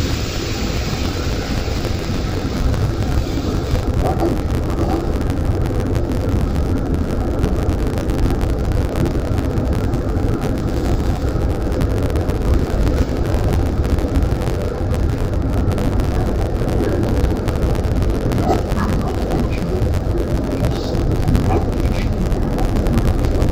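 Throughout, interleaved audio read as planar splits each 10.88 ms block into halves, leaving the sound dull and robotic, buzzing at about 92 Hz without an octave shift.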